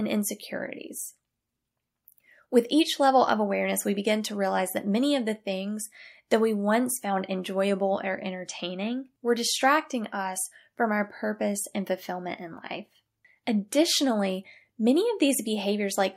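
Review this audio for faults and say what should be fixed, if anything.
No faults were found in this audio, so nothing needs to be fixed.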